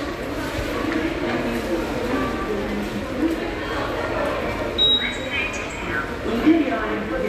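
At 2.39 s and again at 5.69 s, a brief blip cuts through the sound. Both come from damaged data in a compressed stream. Corrupted bytes make the decoder misread those frames. It loses sync and hunts for the next valid frame header.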